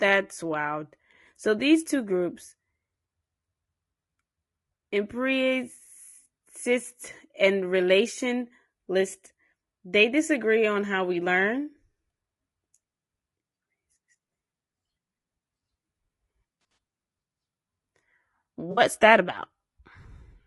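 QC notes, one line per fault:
throughout: low-delay AAC compression, likely AAC-ELD at a rate near 32 kbps; short frames blur pitch harmonics, so speech sounds rough and grainy, with noise between harmonics and a thin, synthetic top.
16.61–16.77 s and 18.71–18.81 s: AAC frame loss with concealment; about 60 ms of audio is missing each time, the first in brief gaps spread over 160 ms. The decoder fills these gaps from the last good spectrum, which leaves smeared, noisy, phasey patches.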